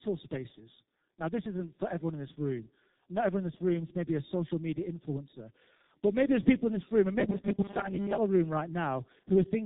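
Speech that sounds rough, muffled and warbly from start to finish, with nothing above about 3.8 kHz, points to tandem speech coding. The call appears to have passed through AMR-NB at 10.2 kbit/s, then G.711 mu-law, then G.723.1 at 6.3 kbit/s. That means two low-rate speech codecs in a row, with the second re-encoding the first one's already degraded output, so the damage compounds. From 7.20 to 8.18 s, just after "in this room and", the voice collapses into a rigid, metallic buzz near 200 Hz that only loosely follows the speech. This is robotic sound from repeated short buffers. The likely cause is audio arriving too seldom, with the player looping a fragment of about 5 ms to fill the gaps. That loop imposes the fixed 200 Hz pitch, and most of the real audio in that stretch is skipped.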